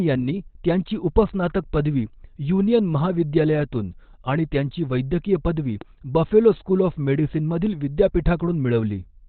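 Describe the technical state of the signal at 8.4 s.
At 8.4 s the speech carries the same damage heard across the whole clip, most likely Opus compression running at a very low rate, around 12 kbps. At that rate the encoder appears to have dropped into its SILK speech mode with a narrowband setting, so nothing sits above about 4.4 kHz. The result is heavy degradation: a muffled, hoarse quality with dulled consonants and no high-frequency air.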